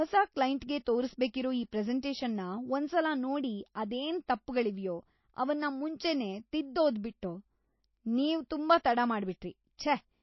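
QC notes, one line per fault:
throughout, MP3 compression: likely an encoder starved at roughly 27 kbps, cutting everything above 5.8 kHz and dropping weak detail, so the speech sounds plainly dull and watery.
9.77 s, pre-echo: quantisation noise spread across the transform block fills the 14 ms before a sharp attack, so a brief hiss precedes it and the onset smears.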